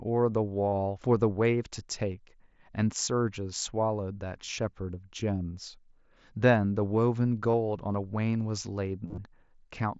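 Concealed Bluetooth headset packet loss breaks into this speech clip at 0.70 to 0.73 s, 3.06 s, 4.45 to 4.48 s and 7.52 s, and as a scattered cluster from 9.06 to 9.18 s. Audio packets from the headset went missing, and the receiver filled each gap by repeating the best-matching recent stretch of waveform. The short gaps each give a brief buzzy hold. The 9.06 s cluster, with runs up to 30 ms, gives a brief buzzy hold and a slight warble as real speech resumes, heard through the 8 kHz wideband mSBC link.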